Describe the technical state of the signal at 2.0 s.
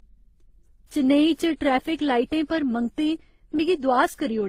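At 2.0 s the speech carries the marks of transcoding between lossy codecs, present across the whole clip. Nothing sounds above 15.7 kHz. That cut-off is inherited from the chain. The cause is likely a low-bitrate HE-AAC stage passed through WMA and then Opus. Each later encoder re-spent bits on the earlier artefacts and added its own. The result is different artefacts heard together, stacked on one another.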